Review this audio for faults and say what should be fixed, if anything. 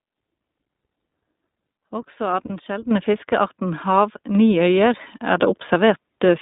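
The speech is coded with the iLBC codec throughout: band-limited to roughly 200 Hz to 3.7 kHz, with plainly audible roughness from 20 ms frame coding. Using a wideband codec such as Opus prevents this.

Lost iLBC frames cause a concealment gap from 2.46 to 2.51 s. The decoder repeats the last pitch cycle mixed with noise for 40 ms, which sounds like a brief buzzy held vowel, and the voice is right again almost at once. A jitter buffer with redundancy or FEC prevents this.

The microphone volume is stepped up twice, by about 9 dB at 2.91 s and about 4 dB at 4.35 s. Speech and background jump in level together each time. Disabling automatic input-volume adjustment in the call software prevents this.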